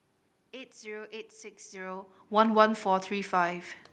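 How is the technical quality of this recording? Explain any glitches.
No glitches to report: the background noise is the room itself, the level change around 1.5 s is the talker shifting relative to the microphone, and the top end rolling off near 12 kHz fits an Opus call path running at roughly 32 kbps.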